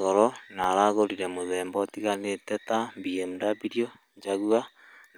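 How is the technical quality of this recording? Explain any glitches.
Two brief clicks mar this speech recording. At 0.64 s, between "goro na" and "aragũrĩre muthemba ũtĩganĩte na", and again at 4.68 s, there's a sharp tick, likely from dropped samples. A fraction of a millisecond went missing, so the waveform jumps abruptly.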